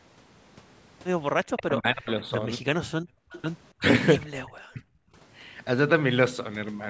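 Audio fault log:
1.56–2.47 s and 4.16–4.81 s: speech suppressed in double talk. The talker's speech sinks by roughly 40 dB over about 0.7 s and then about 0.5 s. This is likely an echo canceller that cannot tell the near talker from the far end while both are talking, and so attenuates everything.
3.01–3.31 s and 5.09–5.16 s: background gated by the echo canceller. The room sound drops by about 35 dB for 0.3 s and then by about 17 dB for a 70 ms moment. The canceller clamps the microphone while the loudspeaker plays, and the ambience returns once it releases.
3.31–3.42 s: echo leak. A faint copy of the sound arrives 289 ms late, roughly 20 dB below the speech, right after the first gated stretch. It is likely loudspeaker pickup that the loudspeaker side's echo canceller failed to remove, which was then sent back down the line.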